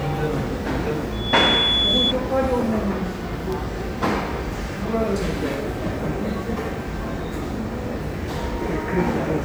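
A clip of everyday sounds with a loudspeaker feedback squeal from 1.12 to 2.14 s. A 3.4 kHz tone swells over roughly a third of a second to sit a few dB above everything else, because the mic was catching its own speaker and the loop ran away.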